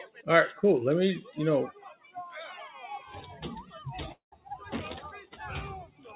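Right from the start there's a speech-tuned noise suppressor running over this audio, which isn't speech material, so it keeps mistaking sustained tones and tails for noise. The level pumps up and down by around 10 dB through the whole clip, with attacks getting through while held parts sag and thin out. All of it comes through a call path with nothing above 4 kHz, which fits a narrowband G.711 mu-law link at 64 kbps.

The first clear bite from the suppressor comes at 0.05 to 0.24 s, where the sound drops by about 15 dB. There's a longer one at 1.73 to 2.16 s, dipping about 14 dB. In both, the steady part of the sound sinks while anything sudden survives.

At 4.12 s the sound breaks off. The last bit is stretched into a fading buzz, then there's about a tenth of a second of silence, and the audio picks up again at 4.34 s with roughly 0.2 s simply gone. That's most likely a long network dropout, with the receiver concealing the gap before giving up and moving on.

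The suppressor then cuts twice more near the end, at 5.24 to 5.39 s and at 5.86 to 6.08 s, each about 13 dB down. Those are short dips where the decaying sound gets clipped off early.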